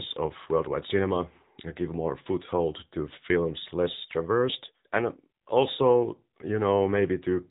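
From start to finish the speech carries the sound of the AMR narrowband mobile codec. Nothing above 3.8 kHz survives, giving a boxed-in telephone tone. The coarse vocal-tract model is plainly audible as a buzzy, synthetic edge, consistent with a low bitrate near 7.95 kbps.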